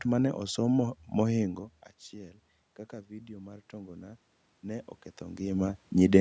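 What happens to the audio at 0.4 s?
Nothing goes wrong at 0.4 s; the speech passes through intact there.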